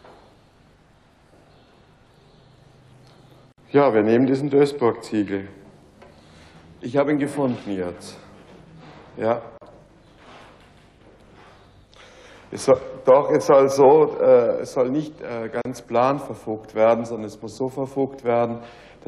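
At 3.52 s the sound drops out for about 54 ms, then again at 9.58 s and 15.62 s for about 37 ms each. These are gaps at a join of encoded pieces: the audio was encoded in segments of about 6 s and joined untrimmed, so each encoder's start-up delay and final-frame padding survive as silence. Each dropout has smeared edges, and the sound resumes exactly where it stopped.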